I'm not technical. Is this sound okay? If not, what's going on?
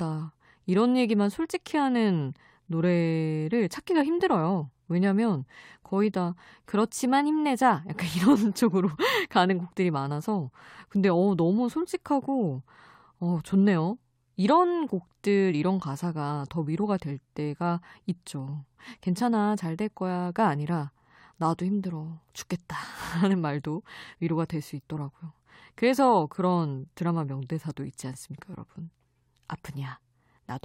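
Yes, no technical faults are audible anywhere in this recording.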